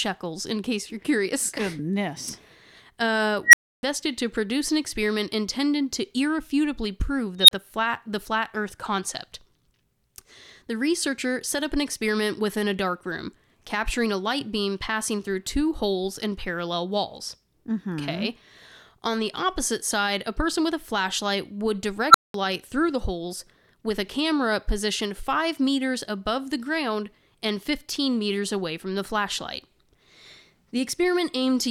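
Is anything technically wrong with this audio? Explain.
Yes. An unstable filter, a recursive stage whose feedback ran away, occurs at 3.46–3.83 s, 7.40–7.51 s and 22.10–22.34 s. Each time a squeal swells within 40 to 90 ms, clips and cuts to silence. The squeals sit around 2 kHz, 4 kHz and 1.5 kHz, and the silences last 300, 30 and 200 ms.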